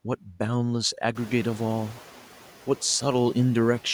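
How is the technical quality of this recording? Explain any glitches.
The recording has one glitch, tied to a jump in the room's background noise at around 1 s, when it climbs by about 18 dB.

Noise suppressor catching up, from 1.15 to 2.01 s: the suppressor's estimate of the background was still tuned to the quieter level, so it let the louder noise through with less reduction than it should. It needed 860 ms to adapt, and over that span the noise sinks by about 4 dB, settling roughly 23 dB under the speech.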